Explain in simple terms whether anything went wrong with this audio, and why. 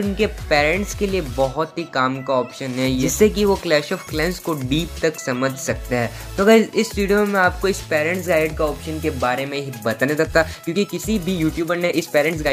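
Something did go wrong near the end. From 10.17 s to 12.52 s there is a time-stretched section. The sound suddenly runs about 1.35 times faster but keeps the same pitch. It sounds rushed. Software likely squeezed this part by dropping tiny pieces.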